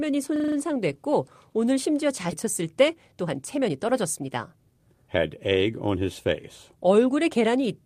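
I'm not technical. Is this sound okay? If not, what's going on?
No. There are three separate problems.

From 0.36 to 0.56 s, the sound briefly turns into a rapid stutter, a buzzy rattle at about 25 repeats per second. This is a system hang loop. The computer or its audio driver froze for a moment, and the sound hardware kept replaying the same 40 ms slice of audio five times in a row until the system caught up. Very little of the speech goes missing.

Right after "오늘 심지어", around 2.31 to 2.33 s, the speech suddenly jumps forward with almost no pause, as if a chunk was cut out. This is a skip ahead. Roughly a second and a half of speech was thrown away, probably because too much audio had piled up waiting to be played. The two sides of the cut are joined almost directly.

From 2.35 to 6.36 s, the talking sounds hurried, about 10% faster than normal, though the pitch of the voice does not rise. 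This is a jitter buffer speed-up. The receiving end had built up extra delay and trimmed many tiny slivers of speech to catch up, removing around four tenths of a second in total. A milder version happens from 6.83 to 7.80 s, about 6% faster.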